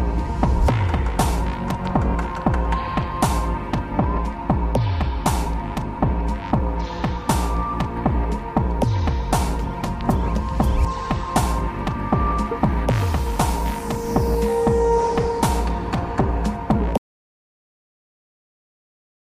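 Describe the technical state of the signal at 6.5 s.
Nothing is wrong with the signal at 6.5 s; the audio is intact at that moment.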